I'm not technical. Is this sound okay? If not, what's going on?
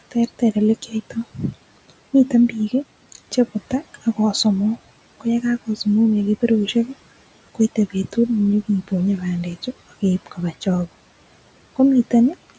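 No. There is speech cut by the noise suppressor at 0.11 to 0.56, 0.82 to 0.93 and 1.1 to 1.54 seconds, just before "miten biik", and again at 10.26 to 10.67 seconds, just after "bandechu ak keip". The call's noise filter mistook brief bits of the speaker for background hiss and turned them down, so a fraction of a second in each spot sounds swallowed or faint, most noticeably around 1.1 to 1.54 seconds.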